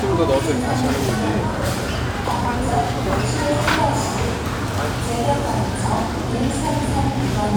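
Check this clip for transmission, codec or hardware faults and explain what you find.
Nothing to flag: no transmission, codec or hardware fault is audible anywhere in this audio.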